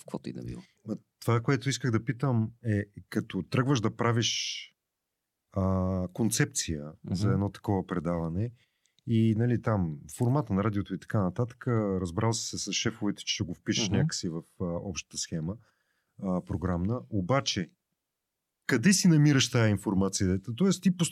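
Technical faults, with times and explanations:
No technical faults can be heard in this recording.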